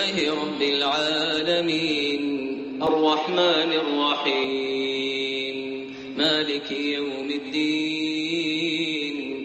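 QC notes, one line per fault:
2.87 to 4.44 s, input switched to a poorer device: the sound abruptly turns dull and boxy, with nothing above 6.6 kHz, its level shifts by around 5 dB, and a faint new background noise appears well beneath it. At 4.44 s the full brightness returns. The switch is seamless, with no gap at either edge. The likely cause is that the recording input briefly moved to a narrower-band microphone or headset path with its own tone and noise floor.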